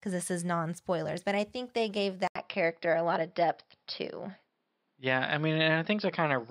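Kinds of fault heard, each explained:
Input switched to a poorer device: just after "I think they gave", at 2.27 s, there's an 80 ms gap, then everything dulls with nothing above 5.4 kHz to the end. Level barely moves, and faint new hiss sits far below. Likely a swap to a narrower-band mic.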